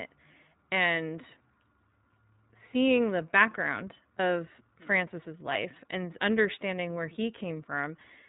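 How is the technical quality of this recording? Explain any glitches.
The recording is held back by iLBC codec coding that runs through the whole clip. The speech passed through a narrowband VoIP coder that rebuilds each frame's excitation independently. The sound points to its 30 ms, roughly 13 kbps mode. Nothing above 3.8 kHz survives, so the speech sounds dull and boxy, with a plainly audible rough, synthetic edge.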